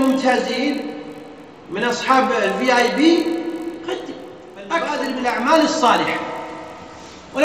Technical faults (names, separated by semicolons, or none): resampler restarted on every block